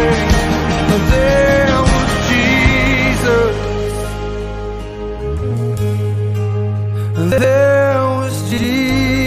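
Chunks out of order at 7.32 to 7.44 s and again at 8.52 to 8.64 s: each time a 60 ms chunk arrived one chunk late and plays after its successor, so the sound briefly jumbles, with three hard joins but nothing missing.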